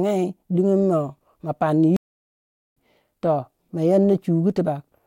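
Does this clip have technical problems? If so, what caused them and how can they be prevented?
Yes. The player likely ran short of buffered data, or its audio thread was held up, so it had nothing to hand to the output. That causes a playback stall. The speech breaks off into silence at 1.96 s, stays silent for 0.8 s, and picks up again at 2.77 s. To prevent it, keep a deeper playback buffer and run audio decoding on a high-priority thread that other work cannot block.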